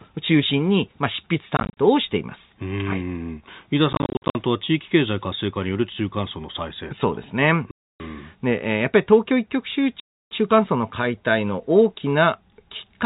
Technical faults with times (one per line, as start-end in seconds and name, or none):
1.57-1.77 packet loss filled with silence
3.93-4.35 packet loss filled with silence
7.71-8.00 packet loss filled with silence
10.00-10.31 packet loss filled with silence